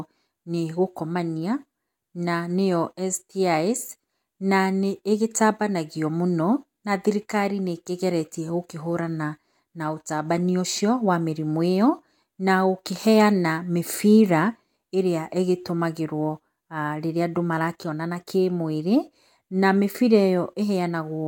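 No technical faults can be heard anywhere in this speech recording. There is nothing to place on the timeline.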